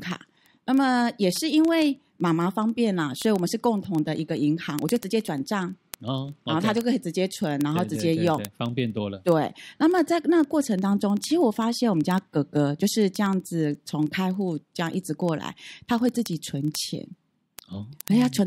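Speech with word clock ticks running from 0.11 s to 18.46 s: a steady train of clicks about every 40 ms, roughly 25 per second and some 500 in all. The digital link is being read by a device on its own clock rather than locked to the sender. With the two clocks differing by something like 700 ppm, they slip past each other at that rate, and each slip drops or repeats a single sample, producing one tick.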